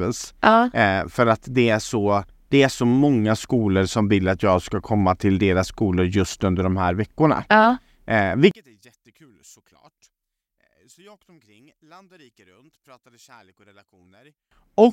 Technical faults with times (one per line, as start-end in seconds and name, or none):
8.51-14.51 one channel inverted